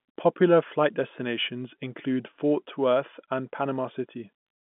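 No faults are present; the speech carries the narrow telephone band of G.711 mu-law coding, spanning about 150 Hz to 3.5 kHz with nothing above 3.8 kHz.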